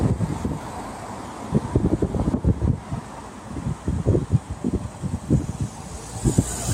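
Throughout, a noise suppressor applied to sounds treats sustains as noise, ducking them about 5 dB, so the waveform envelope pumps and spectrogram tails sink early.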